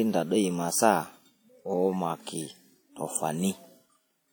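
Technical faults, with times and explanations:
Throughout: WMA compression. The speech has a ringing, washy quality, with hiss that swells and fades along with the voice. Quantisation noise is smeared across long transform blocks, and weak spectral lines are dropped. This is likely a low-bitrate WMA 1 encode, around 48 kbps.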